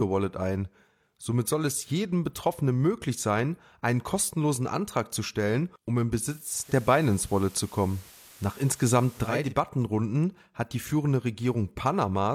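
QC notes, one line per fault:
6.32–9.56 s, digital radio blending to analogue: after "zu stellen um im" a 415 ms cross-fade to FM brings hiss roughly 25 dB down and a level shift of about 3 dB.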